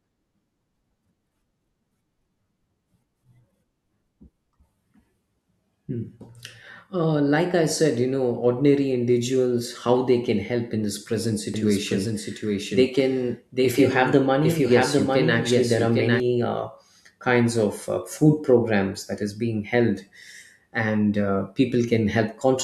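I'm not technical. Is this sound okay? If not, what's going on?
No. From about 11.5 to 16.2 seconds, just after "help in this present", the speech is heard twice. A second, quieter copy trails the original by about seven-tenths of a second, so it sounds like an echo. This is a doubled audio track. It switches on and off suddenly, and ends before "uh kinds of uh". The likely cause is the same audio being picked up again by a slower route, or two copies overlapping out of step in an edit.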